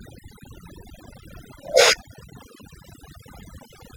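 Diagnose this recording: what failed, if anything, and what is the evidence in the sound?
Overdone noise removal in the processing stage, present throughout. Between phrases the background drops to near silence with twinkling specks. The suppressor is set too aggressively, cutting individual frequency bands near its noise estimate and taking quieter speech components with them.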